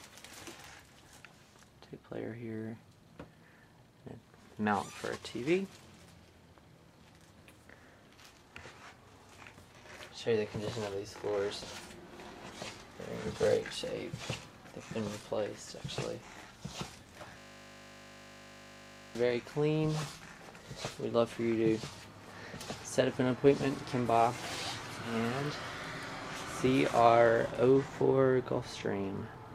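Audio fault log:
17.38–19.15 s, system hang loop: the audio stops progressing and a single 20 ms slice repeats back to back, roughly 90 times over about 1.8 s. Because the repeated piece is so short, it fuses into a steady buzz at 50 Hz instead of a stutter. This points to the host or driver freezing while the sound hardware kept replaying a 20 ms ring buffer until processing resumed.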